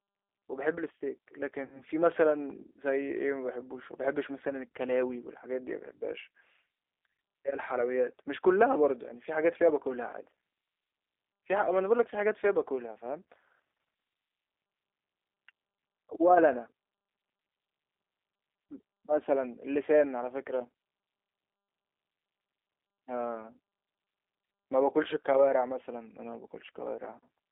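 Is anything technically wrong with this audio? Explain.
Yes, two problems are audible in this speech.

The whole clip runs through the G.729 codec, which fits the 8 kbit/s G.729A variant. It rebuilds speech from a vocal tract filter, a pitch predictor and a few pulses per 10 ms frame, so speech stays intelligible but sounds plainly rough and synthetic. The line band is confined to 300 Hz to 3.6 kHz. On a spectrogram, energy ends sharply at 3.6 kHz with nothing above, and the low end is thin below 300 Hz.

VoIP packet loss concealed by the speech codec appears at 1.65 to 1.83 s and briefly near 11.48 s. The longer gap fits roughly seven lost 10 ms frames, and the second fits a single frame. With packets missing, the decoder repeats its last pitch and filter at falling gain, so the sound turns into a buzzy tone or a coloured noise that fades. Recovery stays weak because each frame builds on the previous one. 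On a spectrogram this shows as smeared, evenly spaced harmonics. The waveform shows a tapering envelope.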